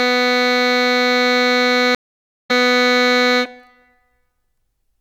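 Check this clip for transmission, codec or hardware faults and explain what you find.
One transmission fault is present in this music clip, a stream reconnect. From 1.95 s to 2.51 s the playback drops out, with about 0.49 s of silence. The connection broke, the player stalled, then reconnected and started a new decoder partway through the stream. When the music returns it has skipped ahead by roughly 0.4 s, so the passage does not continue from where it stopped.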